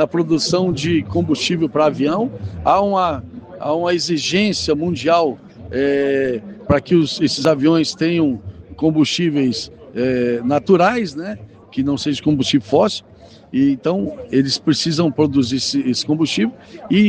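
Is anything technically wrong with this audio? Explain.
Yes, there is one loud pop, from about 7.45 to 7.47 s. A sudden voltage step or pulse, likely from a plug, switch, static discharge or driver glitch, entered the signal path. It is heard as a single sharp pop, peaking roughly 10 dB above the surrounding sound, which continues underneath.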